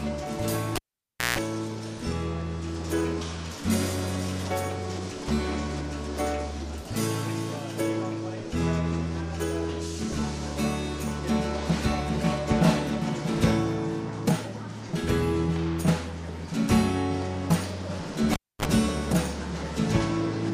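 A pop at 0.76 s drops the audio to near silence, then a 60 Hz mains buzz of about 0.16 s and a second pop bring the sound back at 1.39 s. At 18.33 s the same thing recurs more briefly, with about 0.27 s of dropout and a shorter 50 Hz buzz of roughly 36 ms before the return at 18.65 s. Both are a cable pulled and plugged in while live, with the buzz coming from the plug tip touching before it fully seats.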